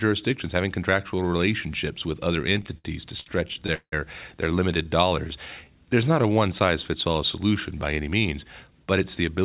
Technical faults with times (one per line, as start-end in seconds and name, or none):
2.42-3.94 repeated stalls (stutter)
4.89-6.67 jitter buffer slow-down
8.64-9.44 jitter buffer speed-up